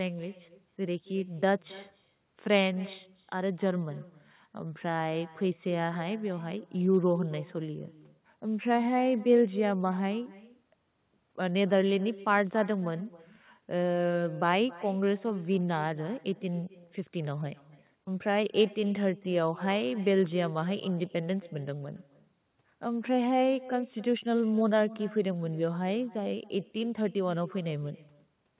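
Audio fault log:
throughout: echo with no canceller. Every phrase returns around 300 ms later as a fainter copy, about 19 dB down. The far end's loudspeaker feeds its microphone and nothing removes it, so the copy sounds thin. Both stop at 4 kHz.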